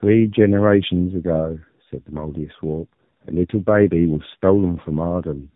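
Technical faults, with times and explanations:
Throughout, tandem speech coding: the speech passes through two low-rate speech coders in a row, consistent with G.729A then AMR-NB near 8 kbit/s with a G.711 link between. Each re-encodes the previous coder's errors, so the speech sounds rough and warbly, with nothing above 3.8 kHz.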